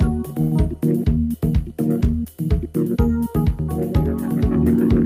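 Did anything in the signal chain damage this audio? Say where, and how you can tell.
Yes. A call audio freeze sits at 0.41 to 0.54 s, likely from network packet delay draining the jitter buffer. The last sound is stretched into a fading buzz or hiss for about 100 ms. Playback then resumes where it stopped, so nothing is lost, only delayed.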